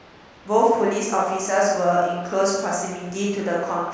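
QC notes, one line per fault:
No faults found in this speech clip; nothing to log.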